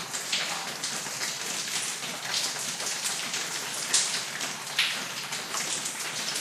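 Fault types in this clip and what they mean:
MP2 compression: The whole clip sounds dull, with a gurgling, granular roughness that stays throughout. This is likely MPEG Layer II coding at a low rate, around 80 kbps, where upper sub-bands lose their bits and drop out while the remaining bands are coarsely quantised. Unlike a simple low-pass filter, the top end flickers in and out rather than stopping cleanly, and the grain sits inside the remaining sound too.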